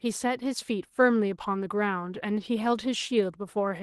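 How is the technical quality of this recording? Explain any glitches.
No glitches can be heard anywhere in the recording. It has passed through a WebRTC call path, and the top end stops at about 12 kHz, which fits an Opus codec running at a moderate call bitrate.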